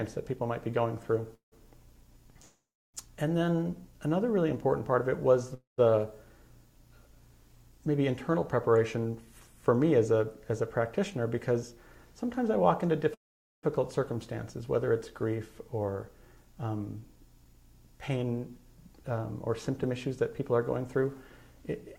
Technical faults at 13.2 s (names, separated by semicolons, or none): call audio freeze